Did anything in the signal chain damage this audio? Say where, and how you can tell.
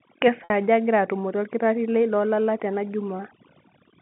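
Yes. Call processing applied overdone noise removal throughout: the background drops and breaks up into twinkling specks, as quiet spectral bands are suppressed along with the noise.

The network stage caused packet loss with pitch repetition at 0.44–0.50 s. A gap of about 60 ms, which fits three lost 20 ms packets, is bridged by a repeated pitch period that fades out.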